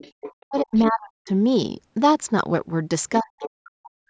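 From 0.0 to 0.34 s a second, fainter voice about 15 dB below the main speech is heard: other side's voice leaking through, likely loudspeaker echo the canceller missed. It returns at 0.57 to 0.9 s, louder at about 10 dB down, and briefly at 3.42 to 3.49 s. From 0.41 to 1.3 s and again from 3.2 s to the end, the talker's speech is suppressed in double talk, likely because the canceller ducked everything while both sides spoke. The level drops by up to around 40 dB in pieces across most of each span. The call microphone processing's cut above 8 kHz is normal band-limiting.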